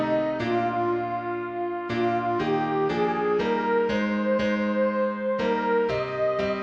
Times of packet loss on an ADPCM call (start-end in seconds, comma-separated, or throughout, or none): none